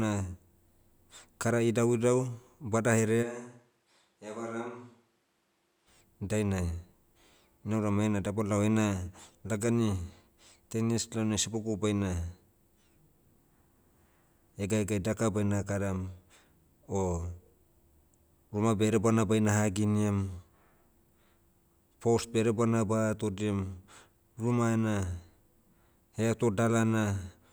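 At 3.24 s the speech suddenly turns roomy and hollow. The low end thins out and the level falls by roughly 10 dB. Room noise rises, though it stays far below the speech. At 5.86 s the close, full sound snaps back. This is a switch to a distant microphone. The close microphone's signal was likely lost or left out, so a mic further from the talker filled the gap.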